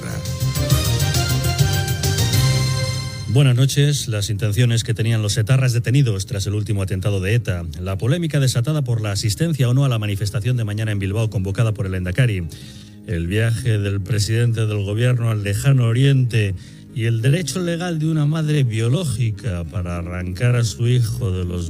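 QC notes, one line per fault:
12.55–21.7 s, time-stretched section: pace suddenly drops to about 0.62x with pitch unchanged, so it drags, likely software stretching by repeating short slices.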